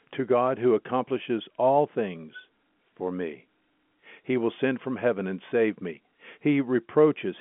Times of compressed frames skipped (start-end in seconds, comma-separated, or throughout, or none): none